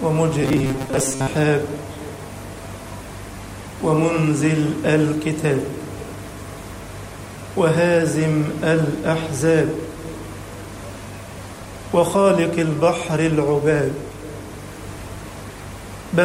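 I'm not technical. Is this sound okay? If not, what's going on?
No. From 0.42 to 1.29 s the sound becomes a metallic buzz: robotic sound from repeated short buffers, likely a tiny 7.5 ms slice replaying over missing audio.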